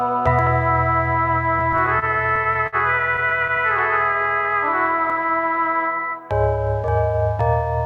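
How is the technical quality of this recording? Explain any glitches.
The recording has one fault, repeated stalls (stutter), in two bursts. From 1.59 to 2.75 s, the music hitches about a dozen times, with the longest hold around 55 ms. From 3.16 to 3.60 s, five shorter hitches follow, none over about 12 ms. Audio packets arrived more slowly than playback consumed them, so the jitter buffer kept running dry and the receiver stretched the last sound to fill each gap. Nothing is lost, but the music drags and jerks. A spectrogram would show short smeared or repeated vertical slices, and the waveform would show brief repeated cycles instead of new material.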